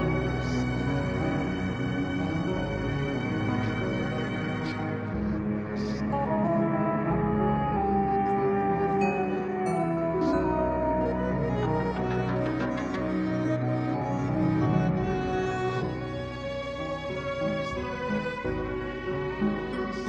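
No technical faults can be heard anywhere in the audio, and the signal stays intact and continuous throughout.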